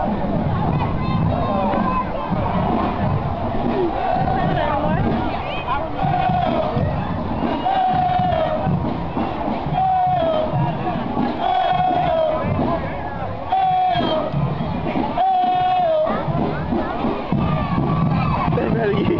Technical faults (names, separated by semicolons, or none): none